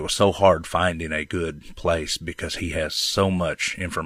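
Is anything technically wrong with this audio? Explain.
No, nothing in this speech recording points to a technical problem, and the signal holds steady throughout.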